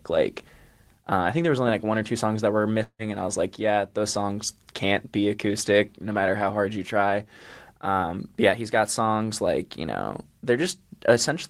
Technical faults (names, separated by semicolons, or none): long network dropout